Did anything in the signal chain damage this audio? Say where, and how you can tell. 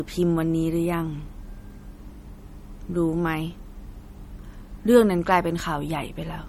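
Yes. The codec stage is the problem: this speech was likely compressed by a low-bitrate MP3 encoder and then re-encoded as MP3 at a much higher bitrate, so it is low-bitrate audio saved at a high bitrate. Throughout the clip the spectrum is empty above 18.6 kHz, and the smeared, coarse texture of the first encoding remains. The larger second file cannot restore what the first pass threw away; it only preserves that damage.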